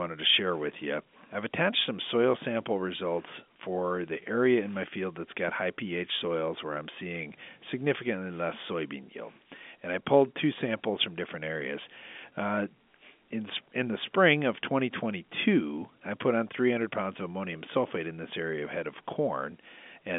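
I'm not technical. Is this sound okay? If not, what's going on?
Yes, this is ordinary telephone-line speech in G.711 telephone coding, so the top end stops at about 3.7 kHz, with no faults.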